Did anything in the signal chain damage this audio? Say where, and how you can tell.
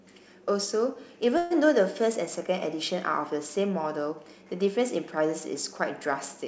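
Yes. Call audio freeze from 1.38 to 1.53 s. A fading buzz fills the gap, likely an emptied jitter buffer. Audio resumes 127 ms late, intact.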